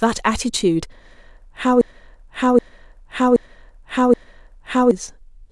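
A broken-record loop runs from 1.81 s to 4.91 s in this speech clip: a fragment about 0.77 s long plays four times back to back, each pass identical, before normal sound resumes. That exact repetition points to a stall somewhere in playback, encoding or streaming, most likely with the stage feeding the audio holding its last buffered piece and resending it. Whatever speech should have filled those three seconds is lost.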